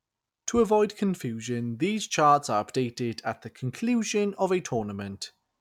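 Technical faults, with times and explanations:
No technical faults can be heard in this speech clip.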